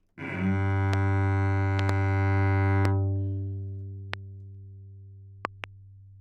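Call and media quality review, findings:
Loud pop, five events: 0.94, 1.79 to 1.91 s (double), 2.85, 4.14, 5.45 to 5.66 s (double). Sharp pulses about 15 dB above the sound, which carries on underneath, unlike a dropout. Likely a voltage spike from a switch, static or driver glitch.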